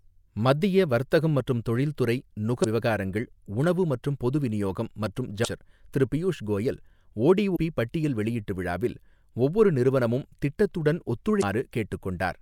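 Damaged data in a compressed stream breaks this speech four times, each break about 40 ms long. Corrupted bytes leave the decoder unable to read those frames, so it loses sync and hunts for the next valid frame header, and each gap comes out as a short chirp or blip. The first is at 2.61–2.65 s, after "மத்திய வர்த்தகம் மற்றும் தொழில்துறை" and before "விவகாரங்கள் உணவு மற்றும் பொது". The second is at 5.41–5.46 s, between "மற்றும் பொது விநியோகம் மற்றும்" and "திரு பியூஷ் கோயல்". The third is at 7.53–7.57 s, just before "பட்டியல் வெளியீட்டு விழாவில் ஒவ்வொரு". The last is at 11.39–11.43 s.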